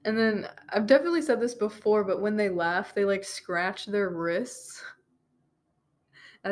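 Nothing in this recording stands out as a technical fault, so there's no problem to walk through here.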